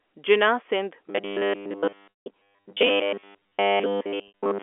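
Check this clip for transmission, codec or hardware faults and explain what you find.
Two kinds of fault are present: a robotic buzz over most of the clip and two brief packet-loss gaps. The telephone coding itself, G.711, works normally, with the usual narrow phone band.

Robotic sound from repeated short buffers runs from 1.08 s to the end at 4.62 s. The speech becomes a rigid, metallic buzz at 100 Hz. That fits a 10 ms buffer being replayed. The likely cause is audio arriving too seldom, so most of the sound is repeats.

Packet loss with pitch repetition occurs at 2.12 to 2.26 s and at 4.28 to 4.32 s. About 160 ms and 60 ms of audio were lost. The receiver repeats the last pitch period, which sounds like a held, buzzy tone that fades out before the speech returns.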